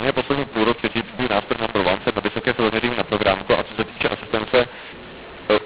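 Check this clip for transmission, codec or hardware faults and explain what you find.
There's one clear fault, and it runs the whole length of the clip: a mu-law and A-law mix-up. The speech was coded as G.711 mu-law, which by itself comes through as you'd expect with nothing above 4 kHz, but it's been decoded as A-law. The two laws map the 8-bit codes onto different logarithmic curves, so every sample lands at the wrong level. Some come out too loud, some too soft, and the quietest ones get pushed well above silence. You hear harsh, gritty distortion on the speech, and the gaps between phrases fill with hiss instead of going quiet.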